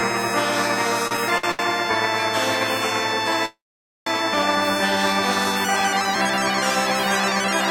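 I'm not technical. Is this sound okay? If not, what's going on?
No. From 1.07 to 1.61 s the music has repeated stalls (stutter). It catches four times in about half a second, each catch no longer than 75 ms. The incoming sound kept reaching the player a little late, so it briefly stretched the last bit of sound to cover each wait. About a third of that stretch is filler, yet nothing is lost, so the music drags and hiccups rather than skipping.

At 3.45 s there is a call audio freeze, a single longer halt lasting about 0.6 s until 4.08 s. The last sound hangs briefly, then most of the pause, roughly half a second, is silence before the music resumes where it stopped. Unlike the stutter's several short catches, this is one clear gap. The likely cause is the sound being held up on its way for that whole moment.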